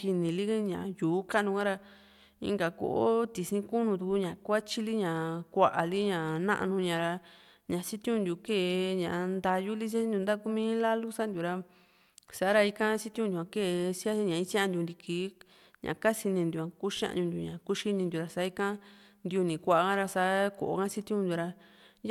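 No technical faults can be heard anywhere in the recording. Nothing in the audio points to a problem in the chain that carried it.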